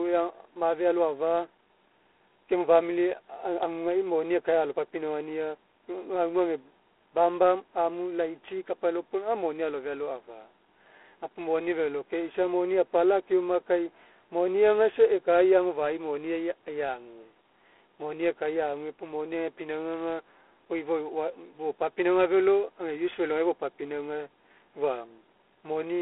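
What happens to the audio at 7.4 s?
At 7.4 s, as throughout, the speech carries G.726 ADPCM damage: coarse adaptive difference coding, consistent with 24 kbit/s, adds a level-tracking rasping hiss, with nothing above 3.8 kHz.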